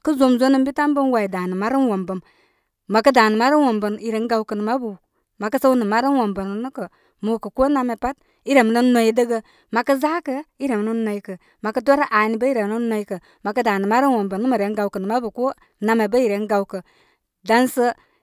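Nothing in this recording stood out as a technical problem on listening.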